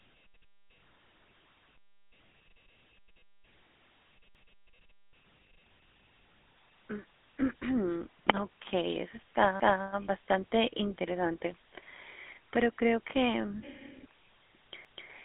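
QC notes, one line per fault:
throughout: GSM full-rate codec. The speech has a buzzy, gravelly roughness, consistent with a 13 kbps GSM full-rate link. The codec models the vocal tract and drives it with sparse pulses, which roughens the voice. The sound sits in a telephone band of roughly 200 Hz to 3.5 kHz, with nothing above 3.8 kHz.
4.35–4.60 s, 9.60–9.85 s, 14.85–15.10 s: overlapping chunks. At each of these joins, 250 ms of audio plays twice, heard as a stutter. The audio was handled in 5-second chunks. Each chunk began before the previous one ended, so the joins recur every 5.25 s.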